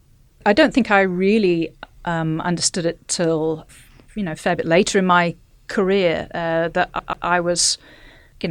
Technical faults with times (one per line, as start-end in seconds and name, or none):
6.99-7.27 CD stuck on one turn